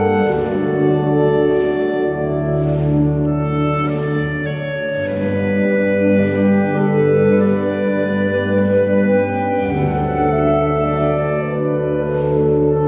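No technical faults can be heard anywhere in the audio.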